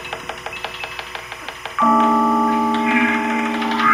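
From start to finish, a timecode bleed sits behind the sound: a steady, chirping warble made of two alternating tones near 1 kHz and 2 kHz. Linear timecode from an adjacent track or cable has coupled into the audio path, and its square-wave signal switches between those two pitches as it encodes each bit. The pattern repeats at 25 frames per second, giving the chirp its regular pulse, and it sits roughly 20 dB below the wanted signal.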